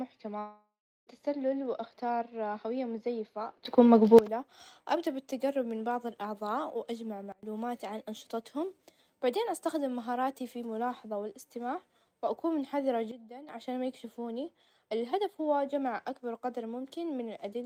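A speech clip with two kinds of fault. From 0.39 to 1.09 s the audio likely suffered a long network dropout: about 0.68 s never arrived, and the receiver kept extending the last sound as a fading buzz before settling into roughly 0.36 s of silence. Speech then resumes with that stretch gone. On a spectrogram this shows as smeared, repeated bands thinning out into an empty gap, and the waveform shrinks to a flat line. Three sudden gain jumps follow, likely from gain changes applied without a ramp, each moving speech and background noise together. After "وأختار هوية مزيفة", the level rises by about 16 dB from 3.65 to 4.19 s. Between "من بعظ الأعظاء وأجمع" and "عن أنشطتهم بعدين استخدم", it drops by about 24 dB from 7.32 to 7.43 s. Between "الملاحظة والإستماع وأكون حذرة" and "عشان ما يكشفوني الهدف", it falls by about 12 dB from 13.11 to 13.49 s. Each appears in the waveform as an abrupt, square-edged step in the envelope, and on a spectrogram as a sharp vertical change in brightness across all frequencies.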